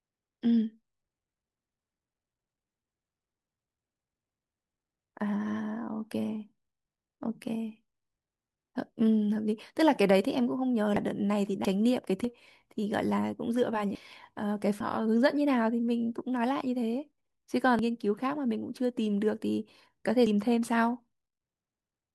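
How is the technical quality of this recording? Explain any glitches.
The recording is marred by repeated compressed frames skipped at 10.96, 11.65, 12.24, 13.95, 14.80, 17.79 and 20.27 s. At each point, a run of encoded frames never reached playback, either lost from the file or rejected by the decoder as corrupt, so the speech leaps forward by roughly half a second to a full second, a jump size that fits frames of about 85 ms.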